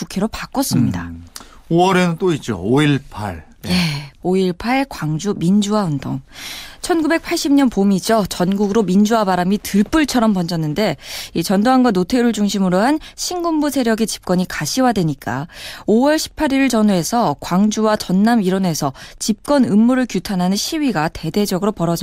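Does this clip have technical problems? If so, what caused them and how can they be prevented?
Yes. A nearby Wi-Fi radio's beacon, sent every 102.4 ms, is being picked up and rectified by the audio circuit, causing Wi-Fi interference throughout: a steady ticking just under ten times a second that sits faintly beneath the speech, roughly 45 dB down. Keeping routers and phones away from the recorder and its cables, and using shielded, well-grounded connections, prevents it.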